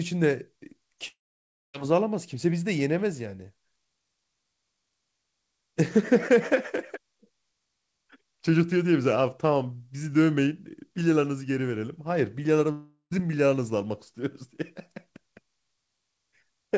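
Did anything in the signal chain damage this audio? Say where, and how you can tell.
Yes, at the network stage. At 1.08–1.76 s and 12.72–13.13 s the sound turns into a fading buzz, falls to silence, then resumes with about 0.66 s and 0.4 s missing. This is likely a long network dropout. A brief packet loss would be concealed without ever reaching silence.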